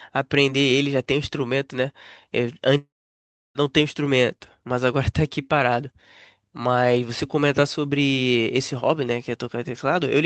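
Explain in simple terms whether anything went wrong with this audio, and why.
At 2.77 s the speech breaks off into a short fading buzz, then falls quiet for about two-thirds of a second. At 3.58 s it picks up again, but roughly 0.78 s of speech is simply gone. This is a long network dropout, most likely caused by the connection briefly failing to deliver any audio. The receiving end stretched out the last sound to cover the gap, let it fade, and then had nothing left to play.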